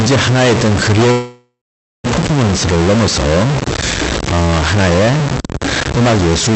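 Speech, carried over a call link whose high end stops around 8 kHz, with two faults. A distortion runs through the whole clip and also fills the pauses with a noise floor that tracks the signal's sign. That points to a stuck bit, most likely a single data line or converter bit held at a fixed value. Ordinary clipping or overload only distorts on loud peaks and leaves quiet gaps clean, while this noise stays present even where there is no speech. From 1.11 to 2.06 s the sound freezes. The last fragment carries on as a fading buzz or hiss, then about 0.49 s of silence, and the speech resumes where it left off. This is a call audio freeze, likely caused by delayed packets draining the jitter buffer. Unlike packet loss, none of the speech is missing. About 0.93 s was inserted, so everything after it arrives that much later.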